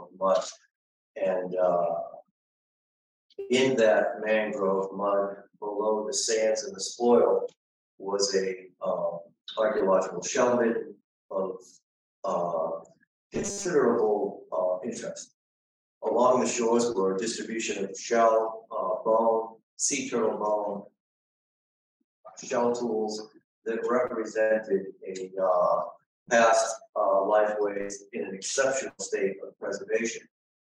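From 13.35 to 13.66 s the sound turns into a rigid, metallic buzz at 200 Hz: robotic sound from repeated short buffers. The likely cause is audio arriving too late, so the playback side loops a fragment of about 5 ms and skips most of the real material in that stretch. A spectrogram would show evenly spaced horizontal harmonics of 200 Hz replacing the normal texture. The waveform would repeat one short shape over and over.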